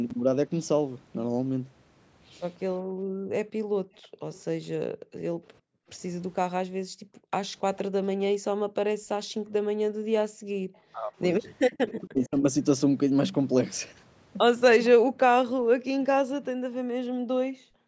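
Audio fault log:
0.09–0.14 s, 3.96–4.40 s, 11.87–11.93 s: echo leak. The far end's canceller likely let loudspeaker pickup through. A faint copy of the speech returns 0.46 s late, at about 30 dB below, rising to about 20 dB below at 11.9 s.
2.83–7.31 s, 8.33–10.65 s, 15.35–17.87 s: background gated by the echo canceller. The canceller clamped the microphone during loudspeaker playback, so room sound drops by up to about 40 dB, for roughly two seconds, one and a half, and two seconds in total.
10.93–11.14 s, 12.07–12.43 s: speech suppressed in double talk. The talker's speech dips by about 30 and 35 dB for roughly a fifth of a second each, likely because the canceller muted both overlapping sides.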